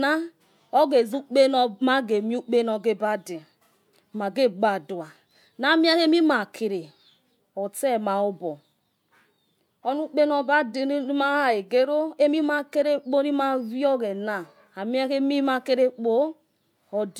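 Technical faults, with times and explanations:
No technical faults are heard in this speech recording. Nothing in the audio breaks, drops out or changes in a way that points to a problem in the recording or playback chain.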